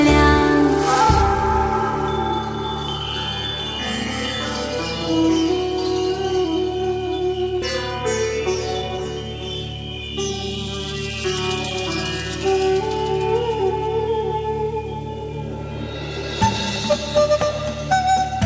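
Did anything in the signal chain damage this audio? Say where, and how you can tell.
Yes. A skip ahead at 7.62 s is a network and jitter-buffer fault. Playback jumps abruptly with no gap or fill, and the material on either side is joined almost directly, so roughly 0.7 s of audio is simply absent. This fits the buffer discarding a backlog of queued audio after overflowing, cutting latency by that same amount instead of playing it late. The call path's codec, consistent with G.722, limits content to below 8 kHz.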